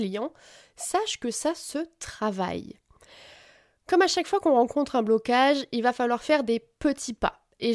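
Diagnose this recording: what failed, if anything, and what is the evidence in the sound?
Nothing in the sound points to a failure at any stage of the chain, so there's nothing to diagnose in this speech recording.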